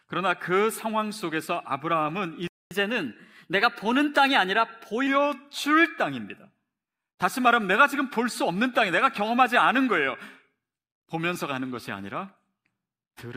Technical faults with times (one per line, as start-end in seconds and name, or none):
2.47-2.71 playback stall
2.71-5.07 catch-up at higher speed